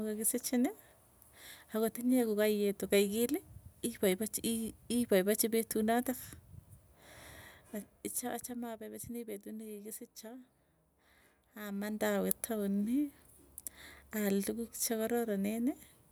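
No technical faults can be heard in this speech clip.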